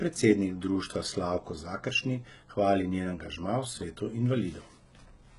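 Throughout the speech, the treble sounds synthetic: sibilants come out gritty and lispy, and nothing is present above 11.1 kHz. This is likely HE-AAC compression, where the upper band is rebuilt by copying lower harmonics upward, and the heavy damage fits a bitrate of about 12 kbps.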